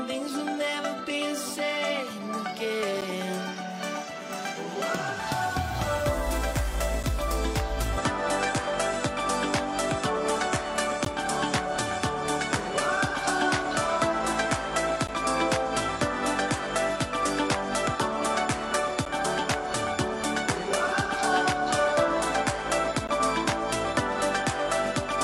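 At 3.01 s and again at 7.03 s the sound drops out for a hard-edged instant, the first of a series of gaps between stream segments. Adjacent segments are stamped with a small hole between them, and the player fills it with silence lasting roughly 8 to 15 ms. No audio is missing around the holes. The spacing is roughly 4 s, which fits 4-second segments. The same clean, brief dropout recurs at 11.05 s, 15.07 s, 19.05 s and 23.07 s.

From 7.98 s to the end, the tone changes abruptly with no silence at the transition and no obvious level shift. Everything above 11.4 kHz disappears, so the top end sounds duller, and a new noise floor about 30 dB below the signal appears. The cause is likely an input switched to a poorer device mid-recording. The replacement input has a narrower bandwidth and its own background noise, and that character holds for the rest of the clip.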